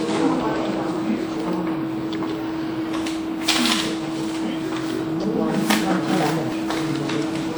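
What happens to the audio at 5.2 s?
At 5.24 s the sound jumps forward: roughly 70 ms of audio is missing, and the material on either side is butted together with no gap of silence. This is a dropped buffer (overrun), most likely because the recording software failed to read its samples before the hardware overwrote them. On a waveform there is a sudden discontinuity at that point.

Around that moment the audio also has a swirly, hollow, smeared character, with blunted attacks. This is generation loss: the audio was decoded and lossily re-encoded repeatedly, and each pass added fresh quantisation noise on a shifted frame grid. The texture suggests around five rounds of WMA coding at 96 kbit/s. On a spectrogram it appears as speckled, blurred energy, with nothing above 20.1 kHz.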